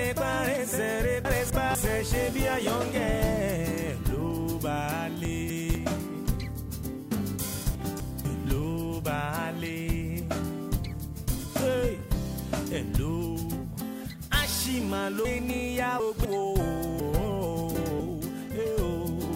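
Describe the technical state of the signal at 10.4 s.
At 10.4 s the signal is intact, with no dropout, click, distortion or other audible fault.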